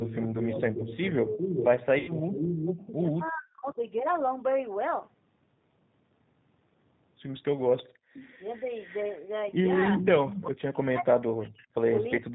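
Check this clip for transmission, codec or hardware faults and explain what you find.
Several faults are present. The most prominent are echo returning about 406 ms late and the near talker being pushed down during overlapping speech, all on top of audible codec coloration.

G.729 codec damage runs through the whole clip. This 8 kbit/s codec rebuilds speech from a vocal tract model, a pitch predictor and a few pulses per frame, and passes nothing above 4 kHz. The result here is plainly audible: band-limited, slightly rough and synthetic-sounding speech.

Echo leak appears from 0.0 to 3.31 s, 7.83 to 9.24 s and 9.89 to 10.45 s. A second copy of the speech trails by 406 ms, strong in the first stretch at only around 5 dB under the main speech, faint in the second at roughly 20 dB down, and around 10 dB down in the third. This is likely residual loudspeaker pickup that the far end's echo canceller failed to remove.

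Speech suppressed in double talk occurs at 0.31 to 1.44 s, 3.09 to 3.81 s and 9.97 to 12.34 s. The talker dips or drops away in pieces, by roughly 15 dB at worst in the first span and by as much as 40 dB in the later two, the last affecting around 1.5 s in total. The canceller, likely unable to separate talker from echo, attenuated both.

VoIP packet loss concealed by the speech codec occurs from 1.99 to 2.13 s. About 90 ms of audio is missing, which fits three lost 30 ms packets. The decoder extrapolated from its last pitch and filter state with falling gain, so the sound smears into a fading buzzy tone or coloured noise and stays weak briefly afterwards.

Background gated by the echo canceller occurs from 7.89 to 8.13 s. While the far-end signal played, the room sound drops sharply, by about 38 dB at its deepest, for around 200 ms. It then returns as the canceller releases its hold on the microphone.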